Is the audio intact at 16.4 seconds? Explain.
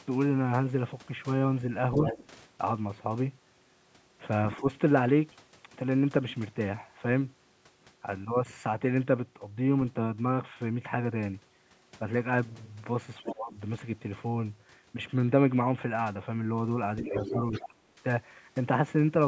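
Yes, the speech at 16.4 s is intact, having passed normally through call microphone processing, which leaves nothing above 8 kHz and trims only the lowest bass.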